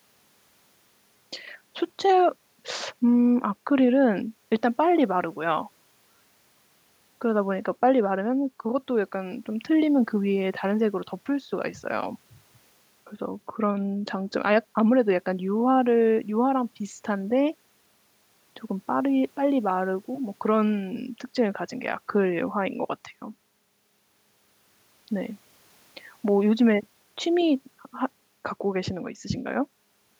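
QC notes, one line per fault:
No faults detected in this speech recording on listening.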